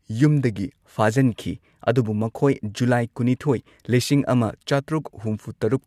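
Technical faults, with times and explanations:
No technical faults are present in this speech recording, and the signal comes through intact with nothing to report.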